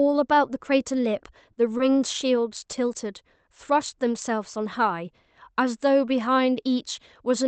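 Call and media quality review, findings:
Short stall from a late packet, 1.77–1.81 s: late arrival drained the jitter buffer on the Opus call path, so the receiver stretched the preceding sound 20 ms until it landed. Nothing lost; sound held slightly too long with slight buzz or dip, playout delay up 20 ms.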